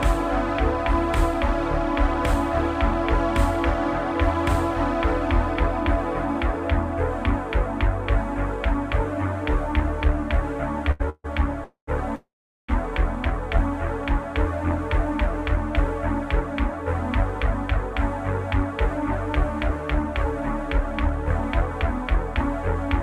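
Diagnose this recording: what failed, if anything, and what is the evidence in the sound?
At the network and jitter buffer stage, a short stall from a late packet sits at 10.91 to 11.02 s: the last sound is held for 82 ms with a faint buzz, then resumes where it stopped. Nothing is lost, and unlike a freeze it never decays into silence.

Three call audio freezes follow, at 11.10 to 11.26 s, 11.64 to 11.89 s and 12.15 to 12.70 s, lasting 145, 233 and 530 ms. Each is a fading buzz that drops to silence for 40, 110 and 410 ms, likely from packets held up in the network, before the audio continues intact.

From 17.77 to 22.68 s, a jitter buffer speed-up plays the audio at 101% of normal speed with the pitch unchanged. Trimming a few pitch periods at a time removes about 50 ms to shed the delay built up earlier. Unlike resampling, the pitch does not rise.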